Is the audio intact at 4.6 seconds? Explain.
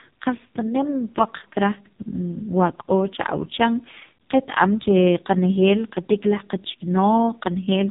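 No, at 4.6 s the AMR narrowband mobile codec damage runs throughout: nothing passes above 3.8 kHz, and the buzzy, synthetic speech, unlike a clean low-pass filter, points to AMR-NB's lowest 4.75 kbps mode.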